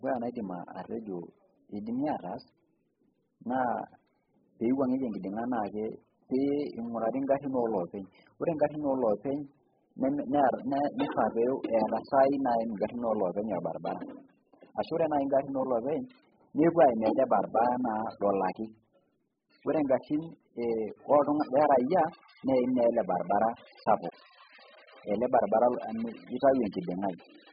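From start to finish, the speech sounds dull and smeared. Nothing is heard above 5 kHz, so consonants lose their edge. The damage is heavy. Sibilants turn fizzy, and held vowels warble. The likely cause is AAC compression, in its AAC-LC form. The encoder had too few bits, so it dropped the top of the spectrum and coded the rest coarsely, leaving gaps. That fits a very low bitrate, around 8 kbps.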